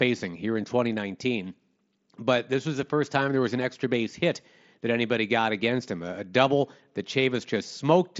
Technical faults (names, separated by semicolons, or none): none